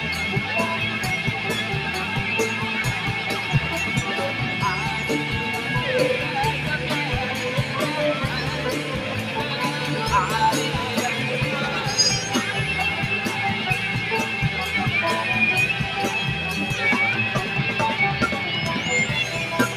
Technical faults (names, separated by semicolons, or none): noise suppressor applied to music or sounds